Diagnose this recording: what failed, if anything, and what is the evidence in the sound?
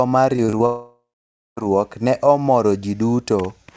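The network is where this one breaks. From 0.36 to 0.62 s there's repeated packet loss, the robotic kind. Four short holes, the longest about 27 ms, with roughly 30% of that stretch patched over. Each time a packet goes missing, the receiver keeps extending the last bit of sound, and the next hole arrives before things recover. That gives the speech a choppy stutter with small pieces missing.

Right after that, from 0.66 to 1.59 s, the audio stops arriving entirely, most likely a long network dropout. At first you hear the concealment stretching the last sound into a fading buzz or hiss, and then roughly half a second of near silence before the speech comes back. Everything in that gap is simply gone. Through all of it the G.722 path stays band-limited, with nothing above 8 kHz.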